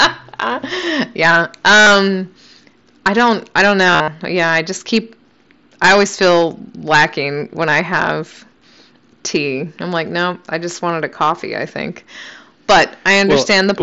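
Throughout, the signal is driven about 17 dB past what a stage can pass, so a few percent of samples have their peaks sliced flat, causing hard clipping, a harsh fuzz on every loud syllable over the mSBC wideband band. At 1.81 to 1.87 s, concealed Bluetooth headset packet loss drops about 52 ms of headset audio, which fits seven 7.5 ms frames, and the receiver repeats recent waveform, giving a brief buzzy held tone. Just after "I don't I don't", from 3.87 to 4.08 s, about 140 ms is lost in scattered gaps. The longest is about 52 ms, heard as stuttering buzz with small warbles where real audio returns.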